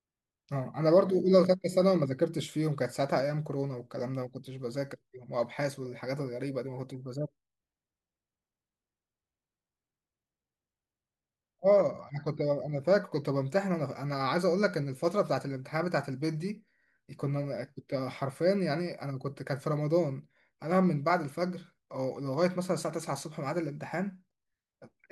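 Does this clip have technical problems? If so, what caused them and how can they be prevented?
No, the recording has no technical problems that can be heard. Since nothing went wrong in the capture or processing, there is nothing here that needs preventing.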